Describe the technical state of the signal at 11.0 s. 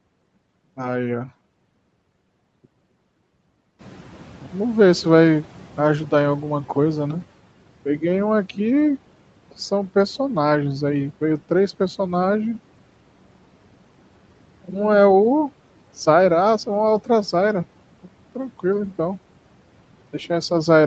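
At 11.0 s the speech is intact, with no dropout, glitch or distortion, only the expected narrowing to about 8 kHz from the call's Opus coding.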